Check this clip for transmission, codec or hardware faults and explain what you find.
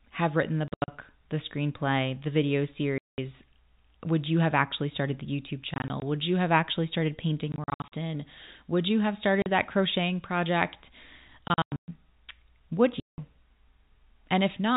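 The speech has repeated dropouts from packet loss filled with silence, carried over G.711 telephone coding that cuts everything above 4 kHz.

Packet loss filled with silence: lost packets, consistent with 20 ms each, were replaced by silence. This leaves abrupt holes at 0.68–0.88 s, 2.98–3.18 s (after "the screenplay the video"), 5.74–6.02 s, 7.52–7.92 s (after "have actually started painting"), 9.42–9.46 s (between "you have" and "that crocheting project"), 11.48–11.88 s and 13.0–13.18 s. Several of these are clusters of short gaps rather than one continuous gap.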